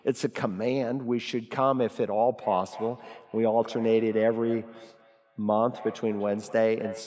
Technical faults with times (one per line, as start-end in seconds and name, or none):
2.40-7.07 feedback echo between two devices